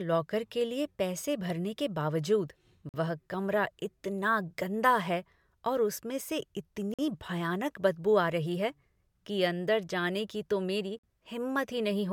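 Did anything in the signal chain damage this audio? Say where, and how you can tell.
Yes. A gap between chunks appears at 2.89 s (after "पैसे भरने के बावजूद"), 6.94 s and 10.99 s. These are hard-edged 48 ms silences repeating every 4 s, left at the joins between segments.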